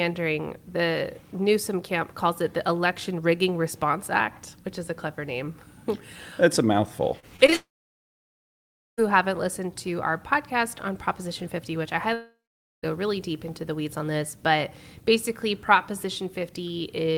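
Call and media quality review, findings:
Repeated packet loss (robotic sound), 7.19–7.54 s: four short holes, longest 31 ms, about a quarter of the span concealed. Jitter buffer/PLC extends the last audio across each gap, giving choppy stutter with pieces missing. Leads into the following outage.

Long network dropout, 7.56–9.0 s: about 1.4 s lost. Concealment buzz fades quickly, then about 1.33 s near-silence before audio resumes with that content gone. Likely a network outage starving the receiver.

Long network dropout, 12.14–12.85 s: 0.7 s lost. Brief fading fill, then about 0.49 s silence. Same mechanism, likely a shorter stall on the network path.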